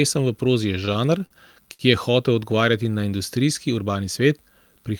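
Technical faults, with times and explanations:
0.85–1.82 s, repeated stalls (stutter), between "v prozi je" and "je hotel odgovarjati na": late packets emptied the jitter buffer six times. Each gap was filled by continuing the last sound, the longest lasting 57 ms. Nothing is lost, but the sound drags and stutters.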